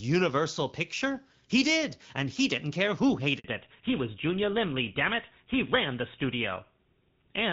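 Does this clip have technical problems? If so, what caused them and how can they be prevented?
Yes. At 3.38 s the call switched networks and a handover gap opened: no speech frames arrived for 60 ms, so the voice dies away and falls silent until 3.44 s, and whatever was said in that moment is lost. Keeping the phone on one network during calls, or using make-before-break handover, prevents this.

From 3.44 s to the end, the call falls back to narrowband, leaving HD Voice at 12.65 kbit/s for an older narrowband codec consistent with GSM full rate. Nothing above 4 kHz survives, so the speech turns duller and rougher. Ensuring both networks support HD Voice prevents the fallback.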